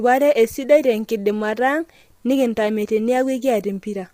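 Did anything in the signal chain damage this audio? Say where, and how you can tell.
Yes, at the codec stage: the speech sounds rough and grainy throughout, likely from heavy low-delay AAC compression, fitting roughly 24 kbps. A spectrogram shows smeared harmonics, noise filling the gaps, and a thin top band.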